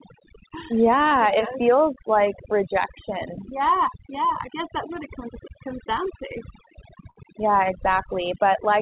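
Speech, with overdone noise removal throughout: bands near the noise floor are pulled down, leaving near-silent gaps with twinkling specks, unlike codec hiss, which stays steady. At 7.1 to 7.17 s there is a short stall from a late packet: the sound is held about 54 ms while the jitter buffer ran dry, then resumes with nothing skipped, which sets it apart from a dropout. The call path's narrowband sound, with nothing above 4 kHz, fits G.711 mu-law.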